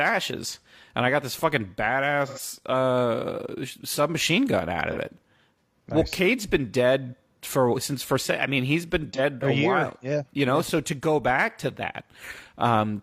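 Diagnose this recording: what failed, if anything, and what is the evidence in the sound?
AAC frame loss with concealment happened at the codec stage. Three short patches are affected: 2.26 to 2.39 s, 4.92 to 4.97 s and 9.14 to 9.20 s. Each sounds smeared, noisy or phasey, and the speech briefly loses its crisp detail. The first gap is about 85 ms, which fits two lost frames. The others are about 43 ms each, which fits one frame. The decoder had no data for those frames. It filled them by re-synthesising the last good spectrum.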